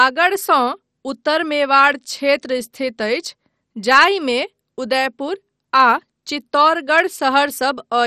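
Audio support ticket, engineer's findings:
Likely MP2 compression (MPEG Layer II) at a low rate, sound points to roughly 56 kbps. Bit starvation across the 32 sub-bands switches upper bands off and coarsely quantises the rest. Throughout the speech: dull top, nothing above 13.7 kHz, flickering highs, heavy gurgling, granular distortion.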